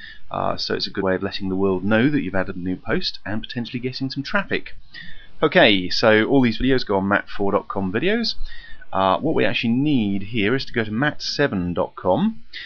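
Across the whole clip the sound has a plainly audible watery, swirling quality, with high-frequency detail thinning and flickering. This is most likely MP3 compression at a low bitrate, which fits about 64 kbps. Short of bits, the encoder discards treble above a fixed cut-off and drops weak frequency lines that come and go from frame to frame. On a spectrogram this shows as a flat ceiling on the upper band and a speckled, patchy texture beneath it, with isolated blocks blinking on and off.

At 2.50 s compressed frames are skipped. Roughly two frames, each 26.1 ms long, never get played, so the audio jumps ahead by about 50 ms. The decoder blends the frames on either side through their overlap, so the join is a brief smeared blip rather than a sharp click. In the waveform the envelope shifts abruptly at that point, with no spike. The spectrogram shows a discontinuity where the textures on either side fail to line up.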